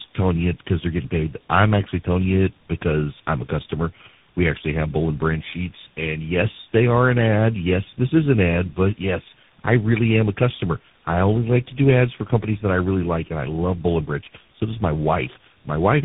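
Tandem speech coding runs through the whole clip. The speech has been coded and decoded by several different speech coders in a row, and each one worked on the previous one's already damaged output. The result sounds rougher, more muffled and more warbly than any single narrowband codec would leave it, with nothing above 3.8 kHz. That stacked, compounding harshness fits a chain of three coders of the AMR-NB, GSM full-rate and CVSD kind, rather than one low-bitrate link.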